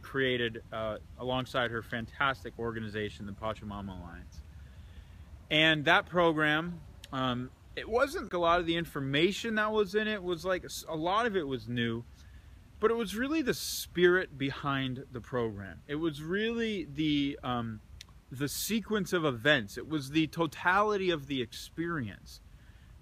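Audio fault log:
8.29–8.31 s: CD skip. The laser jumped tracks, so playback mutes for about 20 ms and then resumes from a different point on the disc's spiral.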